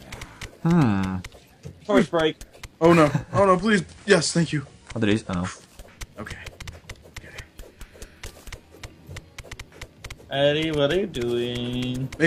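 At 3.1 s the digital radio blends to analogue, which here is FM. The receiver has lost the digital stream and cross-fades to the analogue broadcast of the same station over about 320 ms. A faint hiss rises, well below the sound. The level dips by about 1 dB. At 5.9 s it blends back to digital.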